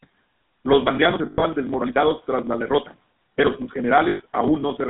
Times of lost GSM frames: 1.26-1.44, 4.08-4.22

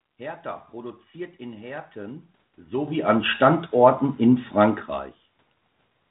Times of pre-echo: none

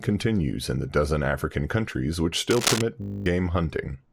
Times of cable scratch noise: 2.50-2.83

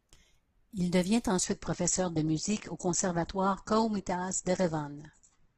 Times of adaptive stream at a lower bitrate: 1.44-5.58

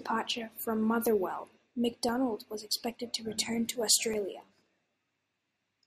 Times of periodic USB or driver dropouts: 1.07-5.17

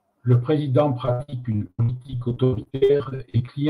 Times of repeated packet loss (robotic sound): 1.05-3.49

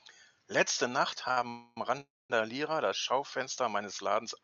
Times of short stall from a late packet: 1.31-1.38

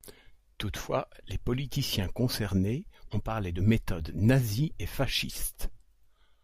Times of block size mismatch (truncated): none

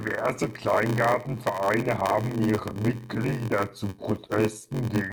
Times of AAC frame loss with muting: none

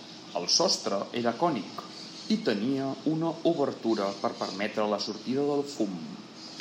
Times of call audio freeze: none

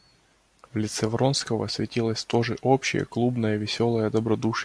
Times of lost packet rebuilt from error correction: none

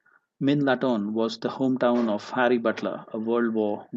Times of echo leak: none

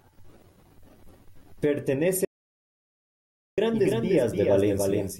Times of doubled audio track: 3.72-5.20

